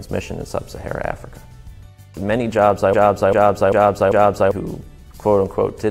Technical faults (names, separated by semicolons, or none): periodic USB or driver dropouts; broken-record loop